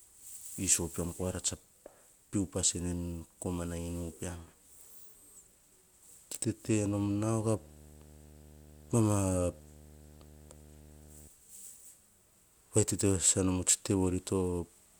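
From 6.64 to 11.28 s, video or display buzz intrudes: screen interference couples in a 75 Hz buzz, well below the speech, with hash above it. A spectrogram shows steady 75 Hz harmonic stripes.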